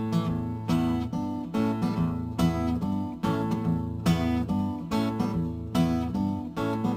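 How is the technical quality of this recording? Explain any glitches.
Quality is compromised throughout. Imaging from sample-and-hold upsampling adds a bright, metallic fizz between roughly 11 and 22 kHz, about 29 dB below the signal. It points to samples repeated without filtering, probably from 22 kHz to 48 kHz.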